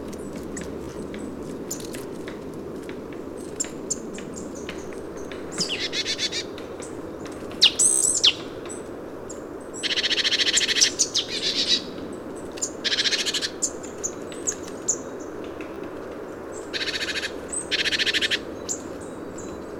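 Bluetooth stutter occurs at 0.84 to 0.97 s, 7.91 to 8.03 s, and 15.74 to 15.84 s. When wireless packets arrive late or not at all, the receiver repeats its last short slice, roughly 15 ms, so each gap becomes a brief buzzing stutter. The first loses about 61 ms in repeats scattered across 120 ms, the second about 107 ms, the third about 30 ms. Afterwards the sound jumps ahead as if it had kept playing.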